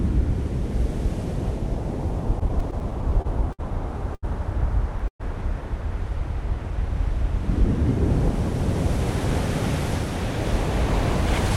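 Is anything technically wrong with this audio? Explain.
Yes. There are three timing faults, all from audio arriving late.

From 2.39 to 3.61 s there are repeated stalls (stutter). The sound halts ten times in just over a second. The jitter buffer kept running dry because data came in slower than it was played. Each time, the receiver held the last sound until more arrived. About 170 ms is filled this way, with the longest hold 61 ms. Nothing is lost, but the passage drags and stutters.

From 4.15 to 4.25 s there is a short stall from a late packet. One packet came 80 ms behind schedule. The buffer emptied, so the receiver stretched the previous sound for 80 ms, then resumed where it left off. Nothing is skipped. A sound is simply held too long, with a slight buzz or dip before the audio picks up again.

From 5.08 to 5.22 s there is a call audio freeze. The sound continues briefly as a fading buzz or hiss, then drops to silence for about 90 ms. 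In total 118 ms is inserted. The likely cause is packets held up in transit, leaving the buffer empty. When they arrived, playback carried on from the same point. So a gap was added, and nothing is missing.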